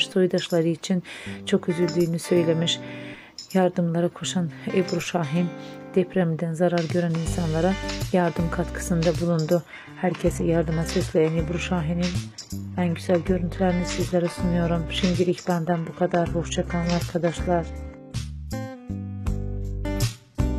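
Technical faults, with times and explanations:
9.29 s to end: adaptive stream at a lower bitrate. Sudden, gapless drop to nothing above 12.3 kHz, synthetic highs and added artefacts, consistent with a low-bitrate HE-AAC rendition.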